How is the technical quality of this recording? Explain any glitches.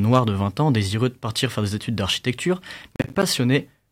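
The recording has one clear glitch, a processor overload crackle from 2.96 to 3.23 s, just after "faire des études d'architecture". The processor fell behind and missed a run of about ten short audio buffers, each around 10 ms. Every missed buffer came out as a brief silent gap with hard edges. Packed together over roughly a quarter of a second, these dropouts give a gritty, tearing crackle that chops through the speech and then stops.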